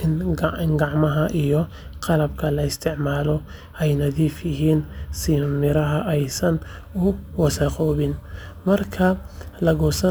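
From 6.61 s to the end, crude rate conversion adds a gritty, inharmonic fizz under the speech. Unfiltered sample dropping fits a 48 to 44.1 kHz change.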